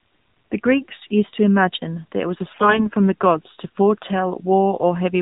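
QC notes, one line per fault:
Throughout: AMR narrowband mobile codec. The speech sounds boxed-in and telephone-like, with nothing above 4 kHz, and a buzzy, synthetic edge. The codec runs at 8 kHz sampling and rebuilds the voice from a vocal-tract model fed by a handful of pulses per 5 ms subframe. The degree of buzziness fits a low mode of around 7.4 kbps, where too few pulses are left to carry the natural texture of the voice.
2.50–2.88 s: AMR bit errors. For about 0.38 s just before "from the gods to", the voice turns hoarse, scratchy and gargly while keeping roughly its pitch and loudness. Bits flipped in the weakly protected part of the frames put the excitation pulses in the wrong places and skewed the finer pitch, gain and spectral values. The damage points to most frames in that stretch being hit, at a bit error rate of around 7 percent.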